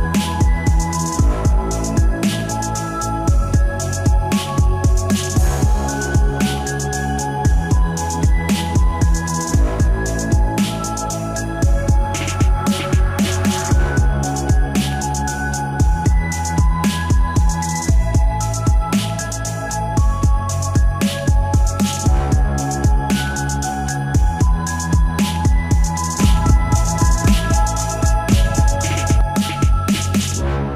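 From 26.19 s to 29.21 s a doubled audio track appears: a second, equally loud copy of the sound trails about a second behind, likely from a slower capture path. Its dry, full-band repeats start and stop abruptly, showing as spectrogram patterns duplicated one second apart.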